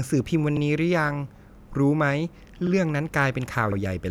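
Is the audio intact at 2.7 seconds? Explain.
No. From 2.67 to 2.72 s the speech shows overlapping chunks: with 1.0 s chunks, the next chunk begins before the previous one ends, so 50 ms plays twice, heard as a brief stutter or click. The waveform shows a repeated segment; the spectrogram, a duplicated slice with a vertical edge.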